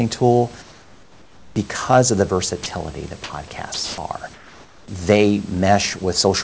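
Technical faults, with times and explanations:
0.62–1.56 s and 4.34–4.88 s, comfort noise in place of the background: in these pauses the real room noise, which sits about 31 dB below the speech, gives way to a flat, featureless hiss about 6 dB and then about 5 dB quieter, lasting 940 ms and 540 ms. The likely cause is discontinuous transmission: the sender stopped sending during silence and the receiver synthesised shaped noise. Unlike a dropout, no speech is lost; only the background's texture and level change.
2.64 s and 3.74–3.98 s, sound dropped by the voice detector: here speech itself, not just background, is replaced by the same steady synthetic noise, for 20 ms at 2.64 s and for 240 ms from 3.74 s, where about 90 ms of actual speech disappears before the sound returns. The likely cause is the sender's voice detector mistaking quiet speech for background and halting transmission. 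What separates it from the background swaps is the missing speech, heard as a clipped sound, over the G.722 path that carries nothing above 8 kHz.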